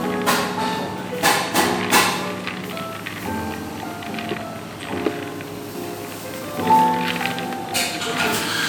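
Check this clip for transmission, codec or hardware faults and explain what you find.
One codec fault runs through the whole clip: generation loss. From start to finish, the sound is swirly, hollow and smeared, with blurred attacks. This is likely from repeated MP3 re-encoding, around five passes, each requantising on a shifted frame grid. A spectrogram would show accumulated holes and noise, consistent with roughly 128 kbit/s.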